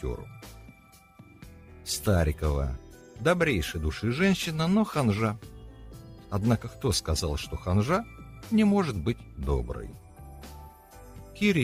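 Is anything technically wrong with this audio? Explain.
No, nothing technically wrong stood out on listening to this audio.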